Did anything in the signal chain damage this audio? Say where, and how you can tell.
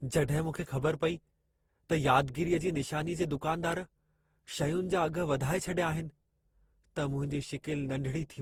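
Yes. The damage happens at the codec stage and runs through the whole speech clip: the sound is swirly and hollow, consonant attacks are blurred, and the noise floor has a shifting, watery texture. This is likely generation loss from decoding and re-encoding around seven times, which fits repeated Opus passes at about 48 kbit/s. A single encode at that rate would not smear this much. Each pass quantises on a new frame grid, so the artefacts stack up.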